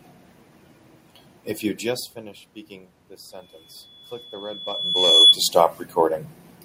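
A speech recording with loudspeaker feedback squeal from 3.31 s to 5.37 s: a pure tone at 3.4 kHz swells over about two seconds until it stands roughly 10 dB above the voice. The microphone is picking up the loudspeaker it drives, and at that frequency the loop gain exceeds one. On a spectrogram it appears as a single bright horizontal line that thickens and intensifies. In the waveform the envelope inflates steadily before cutting off.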